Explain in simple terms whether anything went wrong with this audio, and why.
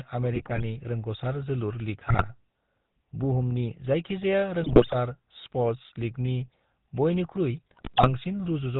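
The whole clip has a buzzy, gravelly roughness and sounds dull and boxed-in, with nothing above 4 kHz. That comes from the GSM full-rate codec, the original mobile-phone speech coder. It rebuilds the voice from a simple model of the throat and mouth, driven by sparse, regular pulses.

Four short bursts of squawking, popping and gargling break in at 0.33 to 0.63 s, 2.04 to 2.24 s, 4.62 to 4.95 s (right after "बुहुमनि जायखिजाया"), and 7.67 to 8.09 s. These are GSM bit errors. A weak link flipped bits in the coded data, which briefly distorted the tone and loudness.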